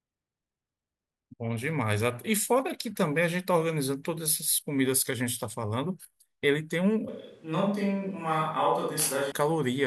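A switch to a distant microphone runs from 7.09 to 9.32 s in this speech recording. The sound turns suddenly roomy and hollow, thinner in the bass, about 5 dB quieter, with room noise roughly 40 dB below the speech. The likely cause is that the close microphone dropped out, leaving only a farther pickup.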